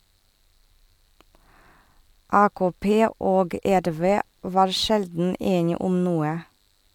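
Filter restarted on every block, from 3.69 s to 4.50 s: across this stretch a filter in the chain loses its memory at each block boundary and begins every block as though from silence. Each restart leaves a small transient, so the speech picks up a regular tick pattern that merges into a buzz at about 86 Hz, a rate that fits a 512-sample block. The buzz rises and falls with the level of the speech.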